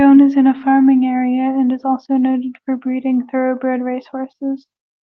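Speech over a call codec path, its top end rolled off at about 8 kHz as the codec's bandwidth setting would produce, with no technical faults found.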